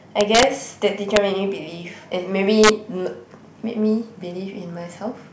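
Integer overflow cracks the speech three times: from 0.21 to 0.43 s with peaks about 3 dB past full scale, at 1.16 s by about 1 dB, and from 2.64 to 2.69 s by about 2 dB. Each excess peak wraps to the opposite extreme instead of being held at the limit, so the waveform jumps across its whole range. The result is a violent snap on loud syllables, far harsher than the flattened buzz of ordinary clipping.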